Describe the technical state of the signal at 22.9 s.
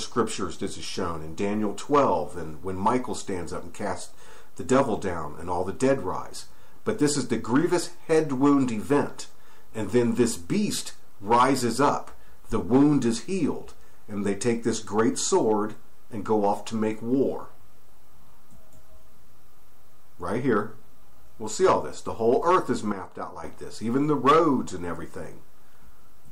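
At 22.92 s the signal drops abruptly by about 8 dB in a single sample step, a sudden gain jump that holds until 23.44 s. The sound and its background noise fall together, so the noise floor moves with the programme rather than staying put. The likely cause is a digital gain change applied instantaneously, such as a setting update or bit shift with no smoothing ramp. The effect is a step down in level across roughly half a second.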